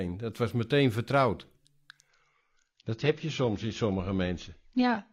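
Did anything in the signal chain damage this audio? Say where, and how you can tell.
Yes. At the network stage, an adaptive stream at a lower bitrate takes over at 2.08 s and runs to the end. The treble abruptly disappears above 6.9 kHz with no gap, and codec artefacts rise. This fits a switch from roughly 96 to 24 kbit/s AAC after the connection slowed.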